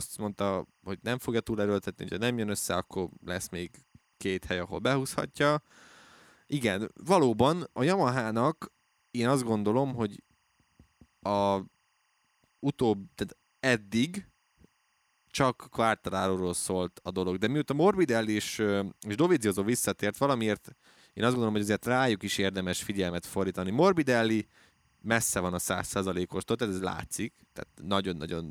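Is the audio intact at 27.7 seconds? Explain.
No. At 27.7 s a faint, steady chirping warble sits well below the speech, as it does throughout the clip. This is timecode bleed: linear timecode at 23.976 frames per second leaking from a nearby track or cable, its square wave flipping between pitches near 1 and 2 kHz.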